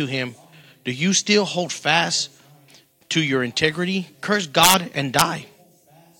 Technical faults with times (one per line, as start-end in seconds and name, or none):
4.63-4.74 integer overflow
5.19-5.21 integer overflow